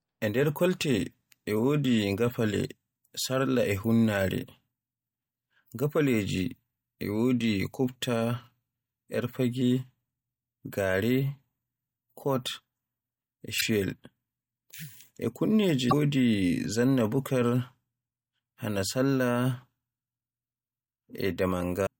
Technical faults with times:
13.57-13.62 damaged data in a compressed stream
15.88-15.93 damaged data in a compressed stream
21.83-21.87 damaged data in a compressed stream

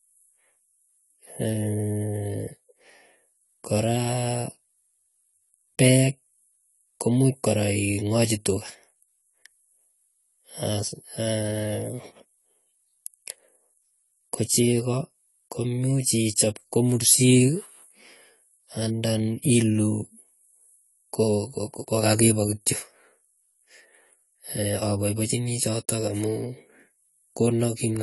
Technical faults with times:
0.00-28.02 AAC compression

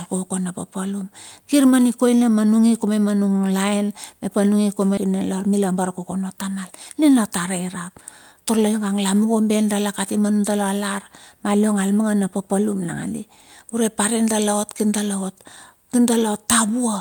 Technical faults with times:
4.97-4.99 skip ahead
5.52-6.00 jitter buffer speed-up
6.94-7.90 jitter buffer speed-up
8.32-8.73 jitter buffer speed-up

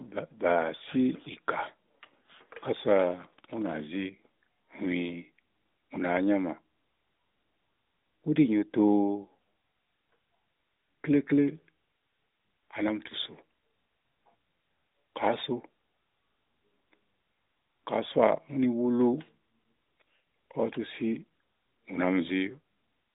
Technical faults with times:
none

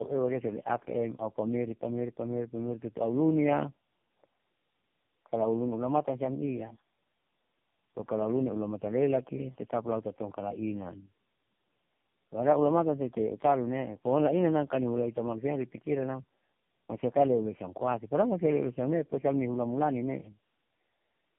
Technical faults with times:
0.00-21.38 tandem speech coding

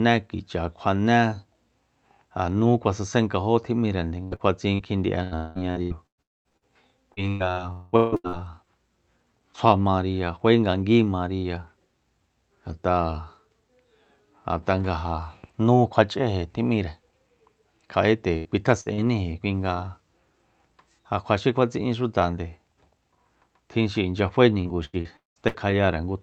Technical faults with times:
4.23-8.35 repeated packet loss (robotic sound)
6.22-6.48 long network dropout
7.72-7.95 long network dropout
15.96 block of digital silence
18.36-18.48 burst of packet loss
18.81-18.89 burst of packet loss
18.94-19.00 short concealed packet loss
24.61-25.75 repeated packet loss (robotic sound)

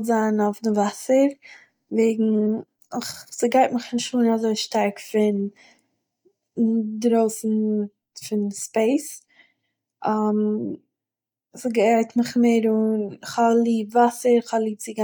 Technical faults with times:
none

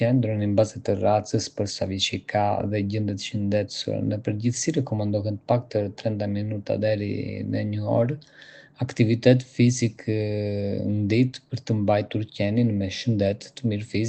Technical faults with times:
none

